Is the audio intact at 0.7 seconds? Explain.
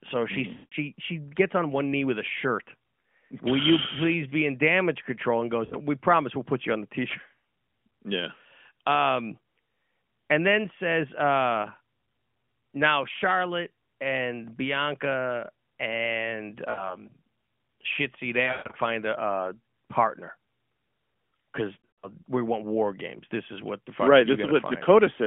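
No. At 0.7 seconds the audio sits inside a burst of lost AMR speech frames running from 0.54 to 0.74 s. Radio errors left those frames failing their checksum, so the decoder kept repeating the last good pitch and vocal-tract settings while lowering the gain. The sound smears into a drawn-out tone that fades toward silence, and the missing stretch of about 180 ms fits a run of nine 20 ms frames.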